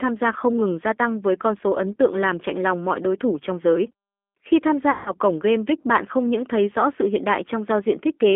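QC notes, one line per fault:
Throughout, G.729 codec: the sound is squeezed into a phone band of roughly 250 Hz to 3.5 kHz, with a plainly rough, slightly synthetic edge. That fits an 8 kbit/s G.729A coder rebuilding speech from a filter, pitch predictor and a few pulses per frame.
4.91 to 5.13 s, VoIP packet loss concealed by the speech codec: a gap that sounds like about 150 ms of lost packets gets papered over. The decoder stretches its last pitch and filter into a fading sound, and the speech stays weak for a while after packets return, carrying into "cổng game".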